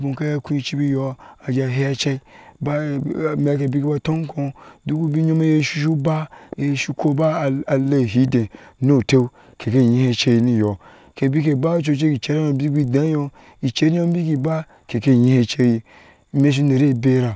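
From start to finish the speech carries a fault consistent with a resampler restarted on every block. The conversion from 24 kHz to 16 kHz was done in separate 40 ms chunks, so each chunk edge lacks its true neighbouring samples and leaves a small discontinuity. These repeat at 25 Hz, heard as a low buzz riding under the voice. On a spectrogram they show as faint vertical lines every 40 ms; the waveform shows tiny steps at the same spacing.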